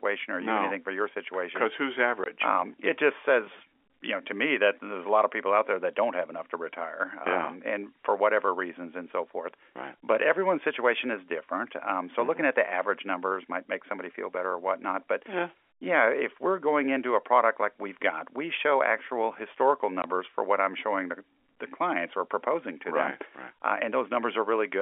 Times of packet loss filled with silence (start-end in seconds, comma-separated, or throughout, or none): 2.24, 20.02